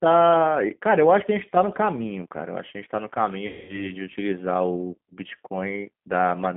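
Throughout, the speech sounds thin, slightly rough and synthetic, confined to a telephone band of roughly 150 Hz to 3.5 kHz with nothing bright on top. This is the G.729 codec at 8 kbit/s, rebuilding each frame from a vocal tract filter, pitch predictor and sparse pulses, leaving plainly audible damage.

From 3.47 s to 3.92 s the speech smears into a stretched buzzy tone or coloured noise that fades, then stays weak and distorted briefly as normal sound resumes. This is VoIP packet loss concealed by the speech codec: about 220 ms of audio was lost, and the decoder extrapolated from its last pitch and filter at falling gain.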